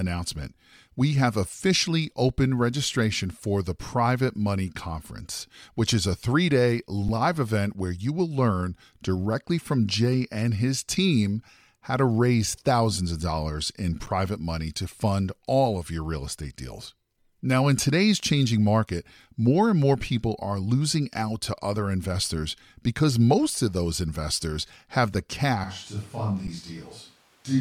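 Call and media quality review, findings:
Underrun with held sample: short freezes in the speech at 7.08 s (about 8 ms), 14.06 s (10 ms) and 26.47 s (10 ms). The waveform flattens at a non-zero level, then picks back up. The output buffer ran dry and the DAC just held its last value until data came back. Each cut loses roughly its own length of live audio. Playout/audio device path.

Switch to a distant microphone: from 25.64 s to the end, speech suddenly goes roomy and hollow, thinner in the low end, about 5 dB quieter, with room noise up to about 30 dB under the speech. Likely cause is the close mic dropping out or getting deselected, with capture falling back to a farther one. Input routing/device selection.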